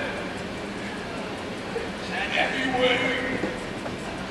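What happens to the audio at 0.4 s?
Nothing goes wrong at 0.4 s; the audio plays through that moment intact, with no dropout, click or other disturbance.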